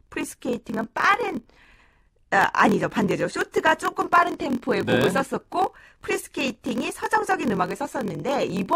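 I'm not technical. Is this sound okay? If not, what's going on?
No. There is a block size mismatch (padded) from start to finish. One part of the system hands over chunks of audio slightly smaller than the next part expects, and the leftover space in each 1024-sample chunk is filled with silence. Those tiny gaps repeat about 43 times a second, giving the speech a low buzz, and they stretch it so it plays at about 0.94 times normal speed.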